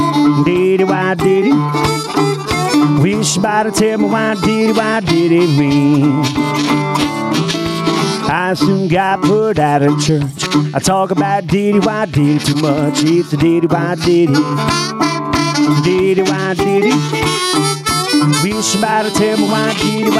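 Gain pumping runs through the whole clip: the gain swings by around 10 dB, so loud and soft parts sit squashed close together, likely from gain set far too high with a fast limiter clamping down.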